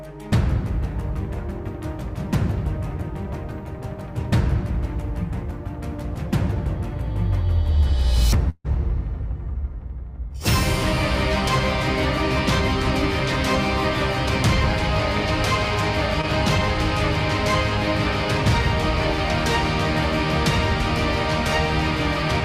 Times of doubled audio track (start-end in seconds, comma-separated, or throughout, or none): none